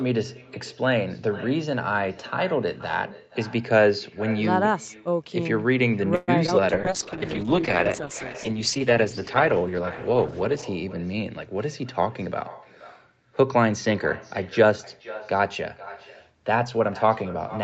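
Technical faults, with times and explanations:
Throughout: echo with no canceller. Every phrase returns about half a second later as a fainter, thinner copy, about 18 dB below the speech, because the far end's loudspeaker feeds its microphone and nothing subtracts that pickup before it travels back.
6.15 to 6.30 s: call audio freeze. For about 0.12 s the last sound is stretched into a fading buzz instead of stopping, likely because delayed packets drained the jitter buffer. Playback then resumes where it left off, inserting a gap while losing nothing.
6.46 to 6.61 s: short concealed packet loss. About 20 ms of audio never reached the decoder in time, and the receiver papered over it by extending the preceding sound and blending back, leaving a brief smear or wobble in place of the missing fragment.
6.74 to 10.97 s: call bitrate drop. The encoder rate falls from 64 to 10 kbps, bottoming out for almost 4 s. 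Opus quantises far more coarsely at that rate, so the sound turns rough and watery and duller on top until the rate recovers.
10.98 to 11.30 s and 16.58 to 17.62 s: jitter buffer speed-up. With surplus audio queued, the receiver trims pitch-period slices repeatedly to shrink the delay, running at about 110% and then about 107% speed, roughly 40 ms and 100 ms removed. Pitch holds while delivery sounds hurried.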